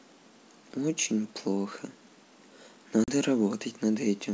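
A speech recording over a G.722 wideband call at what sounds like 64 kbit/s, clear up to 7 kHz, has packet loss on the ADPCM call between 3.04 and 3.10 s. About 40 ms of audio, likely a couple of packets, is replaced by a hard-edged silence. Unlike a plain dropout, the speech does not resume cleanly. The decoder's adaptive predictor and step size have drifted from the sender's, so the returning sound comes back slightly distorted, settling over the following tens of milliseconds.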